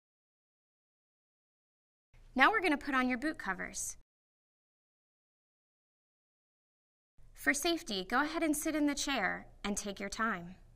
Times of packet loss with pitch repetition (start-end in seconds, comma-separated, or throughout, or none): none